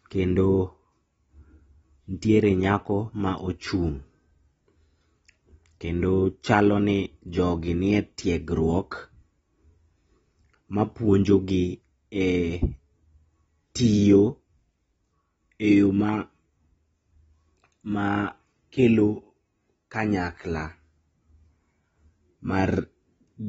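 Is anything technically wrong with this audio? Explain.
Yes. AAC compression runs through the whole speech clip. The sound has nothing above about 7.7 kHz, and it is dull and smeared, with a warbling, fizzy texture on sustained vowels and sibilants. The likely cause is an AAC-LC encoder working at a very low rate, which fits roughly 24 kbps. Starved of bits, it quantises coarsely against its hearing model, lowers the cut-off, and leaves holes in the spectrum that turn into that swirling artefact.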